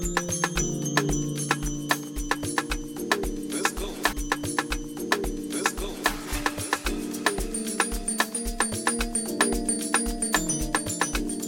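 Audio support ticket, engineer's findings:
Stream segment repeated at 4.12–6.12 s: about 2.0 s of audio plays a second time, small blip at the jump back. Player side, probably fetch/queue logic pulling the same segment twice. Worth checking segment indexing or retry handling.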